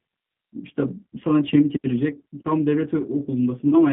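Throughout the speech, G.729 coding is plainly audible. The sound is confined to a telephone band of roughly 150 Hz to 3.5 kHz, with nothing above 3.6 kHz. Unlike simple band-limiting, the voice is also rough and synthetic, as it would be if rebuilt from a filter and sparse pulses at about 8 kbit/s.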